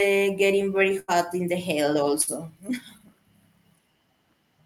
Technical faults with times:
0.99-1.14 burst of packet loss
2.21-2.29 burst of packet loss

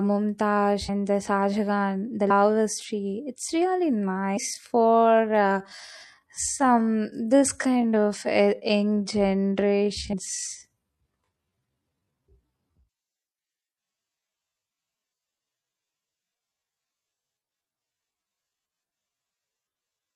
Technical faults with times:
0.00-20.16 MP3 compression
0.88 compressed frames skipped
2.29 compressed frames skipped
3.93-20.16 time-stretched section
4.36 compressed frames skipped
10.12 compressed frames skipped

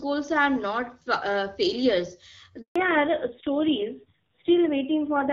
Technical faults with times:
2.62-2.76 handover gap
2.76-5.33 fallback to narrowband

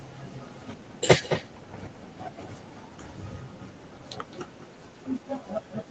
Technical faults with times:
0.00-5.90 echo with no canceller

